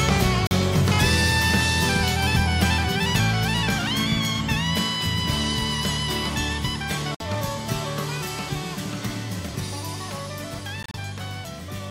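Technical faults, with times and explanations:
0.47–0.52 s, 7.15–7.22 s and 10.83–10.96 s, Bluetooth dropout: the sound cuts to silence, with abrupt or briefly faded edges, for about 42 ms, then 56 ms, and at the last point breaks into several short holes over about 112 ms, none longer than 28 ms. The likely cause is wireless packets arriving too late to play. Unlike a stall or buffer underrun, the audio does not pause and pick up where it left off. It resumes further along, as though it had kept playing through the gap.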